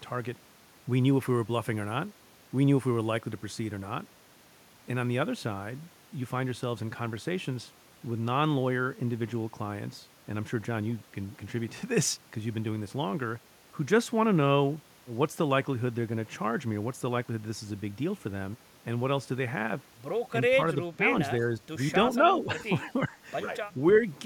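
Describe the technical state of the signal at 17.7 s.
At 17.7 s the speech signal is intact, with no dropout, clipping, glitch or other fault to be heard.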